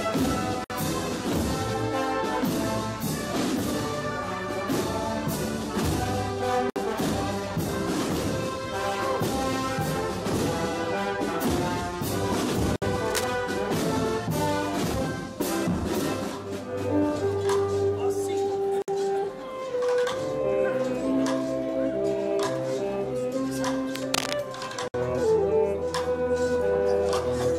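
At 0.64 s the sound drops out for about 57 ms, then resumes exactly where it stopped. The same gap, about 60 ms long, returns at 6.70 s and 12.76 s. This is a gap at a join of encoded pieces. The audio was encoded in 6-second sections and butted together untrimmed. Each section keeps its encoder's leading silence and padded final frame. The edges are smeared by the codec.

From 13.05 to 13.24 s a dense, uneven scratching sits over the sound, only about 5 dB below it. This is cable scratch noise. Its likely cause is a worn cable, connector or control being moved, so its contact resistance jumps around rapidly.

The join gaps recur at 18.82 s and 24.88 s. Just before the last one, a longer burst of scratching runs from 23.94 to 24.33 s.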